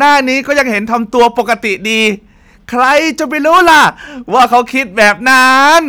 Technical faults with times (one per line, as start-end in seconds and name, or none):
0.00-5.89 hard clipping